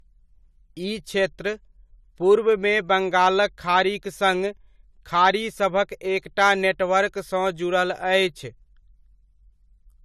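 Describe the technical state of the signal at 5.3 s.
At 5.3 s, as across the whole clip, the speech shows nothing above 14 kHz and carries low-bitrate coding artefacts. This is likely low-bitrate audio saved at a high bitrate: the MP3 re-encode, probably near 320 kbit/s, kept the earlier codec's losses.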